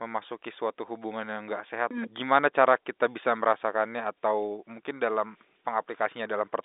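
No technical faults are present.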